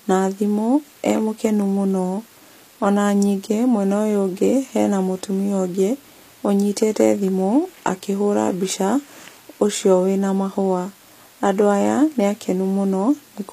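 From start to finish the speech carries plainly audible codec damage, most likely HE-AAC compression, at a rate that fits roughly 24 kbps. Nothing is present above 14.9 kHz. The upper band has been rebuilt from copied lower bands under a coarse envelope rather than coded directly. Harmonics fail to line up across the crossover, so sibilants come out gritty and metallic, with a lispy edge.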